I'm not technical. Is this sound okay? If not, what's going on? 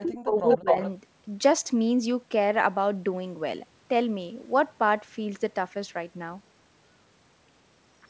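No. From 0.0 to 0.69 s the speech drops sharply for about half a second, likely speech suppressed in double talk, where the call's echo removal turned down the talker's voice along with the loudspeaker echo. From 0.49 to 0.9 s a second copy of the speech arrives 240 ms late, nearly as loud as the original, likely an echo leak from a loudspeaker.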